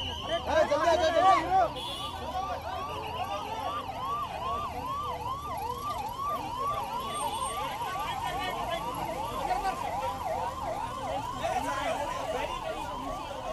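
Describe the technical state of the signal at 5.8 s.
At 5.8 s the signal is intact, with no audible dropout, distortion or other fault at that point.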